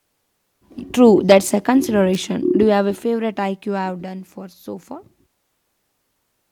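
At 2.14 to 2.16 s, just after "that's a", a sharp snap peaking around -15 dBFS sits on the speech, likely an electrical switching spike from a nearby arc.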